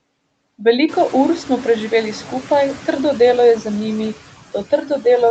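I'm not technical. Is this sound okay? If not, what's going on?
No. Noise suppressor artifacts run through the whole clip. The call's noise suppressor pushes down the background noise between phrases, then lets it back under speech. This gets more noticeable once the room gets louder at around one second.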